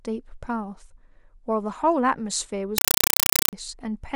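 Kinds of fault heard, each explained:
compressed stream played as audio: From 2.78 to 3.53 s the speech gives way to very loud, harsh, chattering static: short noise bursts about 5.3 ms long, repeating 31.25 times a second with silence between them. An encoded Dolby Digital bitstream reached the output without being decoded and was played as ordinary samples. Each burst is one frame of coded data followed by zero padding, a pattern that fits an AC-3 stream.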